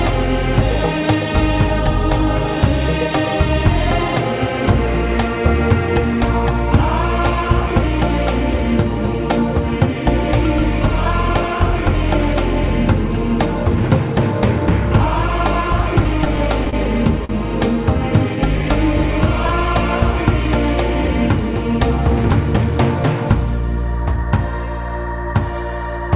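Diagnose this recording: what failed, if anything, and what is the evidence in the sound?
There's repeated stalling (stutter) from 16.04 to 16.75 s, a network and jitter-buffer problem. Packets kept showing up late, so the buffer ran dry five times and the receiver stretched the last sound to cover about 67 ms in total, the longest gap 29 ms. Nothing actually goes missing, but the audio drags and catches.

Right after, at 17.25 to 17.31 s, there's a short stall from a late packet. One packet wasn't there in time, so the receiver held the previous sound for about 45 ms, then picked up exactly where it left off. You hear a slightly overlong, buzzy hold.

From 18.36 to 19.81 s the jitter buffer is doing a slow-down. It's rebuilding its reserve by repeating single pitch periods and bits of pauses, adding about 65 ms. That's a playback rate of about 96%, so the audio stretches out while the pitch stays put.

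Then from 21.97 to 22.67 s there's the opposite, a jitter buffer speed-up. With a backlog to clear, the receiver trimmed out short pitch-period slices, roughly 50 ms altogether, and ran at about 105%. The audio sounds a touch hurried at unchanged pitch, all over the G.711 A-law call path that stops at 4 kHz.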